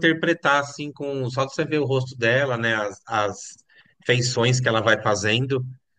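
Nothing here stands out as a technical fault; the speech runs along without any glitch or interruption worth pointing to.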